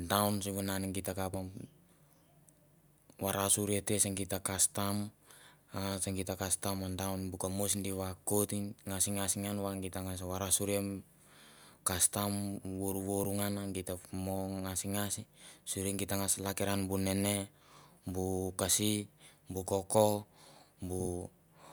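Listening to this speech recording, nothing stood out as a technical problem at any point.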